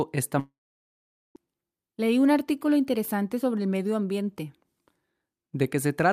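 A long network dropout likely halted audio at 0.39 s, leaving a short fading buzz, then 0.82 s of silence. Speech returns at 1.37 s with nearly a second lost.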